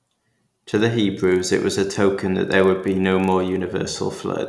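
From start to end, the speech carries a resampler restarted on every block: each 40 ms block was converted from 48 kHz to 24 kHz in isolation, leaving an edge error every block. It sounds like a 25 Hz ticking buzz under the speech. On a spectrogram it appears as thin vertical lines every 40 ms, and on the waveform as small steps at the block joins.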